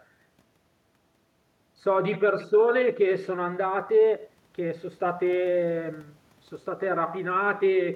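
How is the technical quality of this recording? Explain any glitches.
Nothing here trips the ear; the speech just rolls along smoothly with no glitches to point out.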